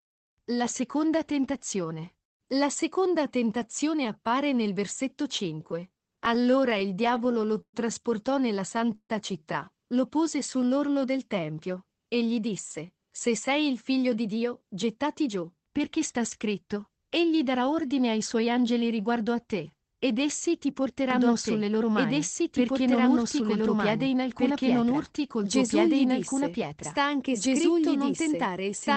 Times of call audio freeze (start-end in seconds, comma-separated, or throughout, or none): 8.95-9.11